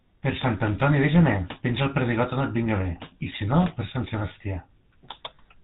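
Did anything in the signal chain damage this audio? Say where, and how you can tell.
Yes: GSM full-rate codec damage runs through the whole speech clip at the codec stage. The voice is buzzy and gravelly, with nothing above 4 kHz, which fits a 13 kbps GSM coder exciting a vocal-tract model with sparse regular pulses.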